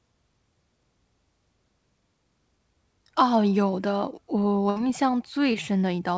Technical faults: burst of packet loss; short concealed packet loss

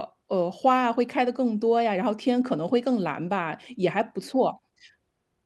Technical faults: none

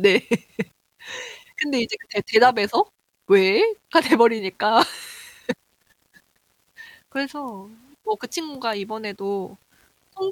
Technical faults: low bit depth without dither

